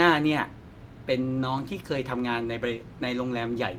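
At 1.37 s, running to about 1.43 s, the speech turns briefly rougher and noisier: a lost packet rebuilt from error correction. Some 40 ms of audio, which fits two separate 20 ms packets, never arrived, and the decoder substituted the low-bitrate copies carried in the following packets. Unlike a dropout there is no silence, and unlike plain packet-loss concealment there is no smeared or repeated tail. The speech keeps moving, only coarser.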